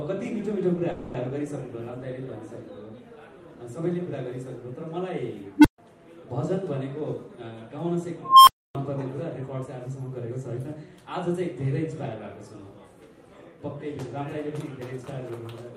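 From 0.91 to 1.16 s the audio stalls: the last sound is drawn out as a fading buzz or hiss for about 230 ms, then resumes exactly where it stopped, with nothing skipped, only a gap added and the playout delay shifted by that same 230 ms. This is likely a call audio freeze, where packets were held up in transit, the jitter buffer ran dry, and the receiver stretched the final fragment until delivery resumed. At 5.58 s a low tone of roughly 300 Hz swells to a clipped squeal within about 65 ms and then drops to silence for about 140 ms, ending at 5.78 s. At 8.23 s a second tone near 1 kHz builds more slowly, over about 0.25 s, before cutting to roughly 0.28 s of silence that runs to 8.75 s. Both events are an unstable filter: a recursive filter fed bad coefficients amplifies its own output until the values overflow and the output dies until the filter resets. Three stretches sound hurried without any rise in pitch: 6.44 to 7.02 s and 9.54 to 10.74 s run at 106 percent speed, and 14.93 to 15.66 s at 105 percent. 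This is jitter buffer speed-up. Holding more audio than its target, the receiver trimmed many short pitch-period slices, around 40 ms in total in the first and last stretches and about 70 ms in the middle one.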